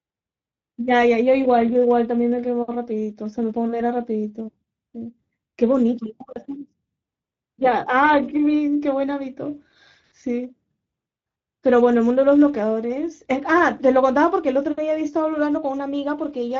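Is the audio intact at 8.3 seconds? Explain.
No. At 8.3 s the speech sounds hoarse and noisy, with nothing above 7.7 kHz, as it does throughout: Speex codec damage, fitting a bitrate around 16.8 kbps.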